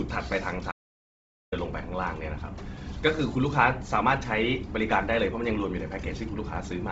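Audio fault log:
Throughout: Bluetooth LC3 compression. The speech carries a heavy grainy, breathy roughness, and the spectrum stops dead at about 7.7 kHz with nothing above it. This is likely the LC3 transform codec at a low rate, which fits roughly 24 kbps with 7.5 ms frames. At that rate the encoder discards much of the upper spectrum and fills gaps with shaped noise.
0.72–1.52 s: Audio dropout to silence. The speech cuts off abruptly and resumes mid-flow after about 0.81 s. The gap is silent with no room tone or background at all, so whatever was spoken in that stretch is simply absent. The likely cause is a lost input, such as a link interruption or momentary disconnect, during which the recording chain kept writing silence rather than stopping.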